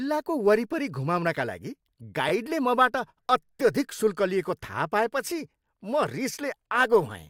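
Repeated frames at 2.28 to 2.30 s, just after "घुमाउनका लागि", in this speech clip: a block of about 21.3 ms, which fits a single compressed frame, plays twice, adding a brief stutter and 21.3 ms of length.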